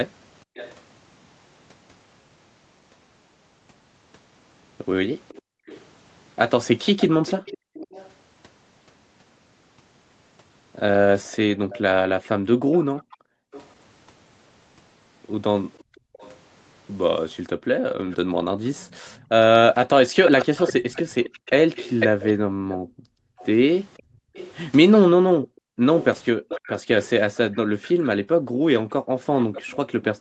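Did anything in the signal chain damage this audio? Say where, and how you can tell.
Yes. An echo leak in the call processing puts a faint copy of the speech 500 ms behind itself, about 20 dB down at 0.55–0.75 s and 5.28–8.11 s, then about 15 dB down from 11.23 s to the end. A fixed, discrete delay rules out room reverb. The likely cause is an echo canceller that missed part of its loudspeaker pickup.

The background is also gated by the echo canceller. Room sound sinks by as much as about 40 dB within 5.42–7.75 s, 11.59–16.14 s and 22.46–28.65 s, briefly in the earlier spans and for several seconds in the last. The room sound returns when the canceller lets go, so this is suppression rather than a network dropout.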